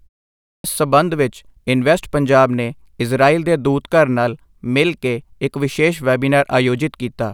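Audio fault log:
0.54 to 0.64 s, clipped start after a pause: after about half a second of silence, the speech bursts in abruptly at "ਸੰਬੰਧ ਵਿੱਚ ਇਨਵੈਸਟ ਪੰਜਾਬ" with its first 0.1 s swallowed, as the output path wakes from idle too slowly. Unlike muted pauses, which are heard only as quiet gaps, actual speech onset is lost.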